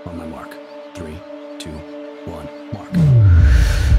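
No technical faults can be heard anywhere in this clip.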